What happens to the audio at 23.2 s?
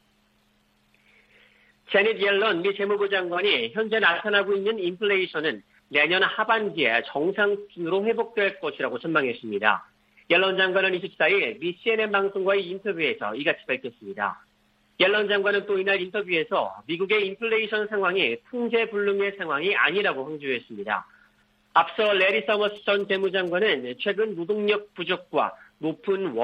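GSM signalling bursts run from 22.06 to 23.49 s: a nearby phone's rectified radio pulses give galloping ticks and 217 Hz buzz, well below the main sound, seen as clustered vertical stripes.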